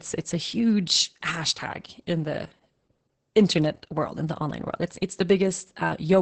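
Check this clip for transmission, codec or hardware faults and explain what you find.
One codec fault runs through the whole speech clip. Opus voice compression: nothing above 8.5 kHz, and SILK's coarse excitation coding leaves it hoarse and robotic, suggesting roughly 10 kbps, unlike a plain low-pass.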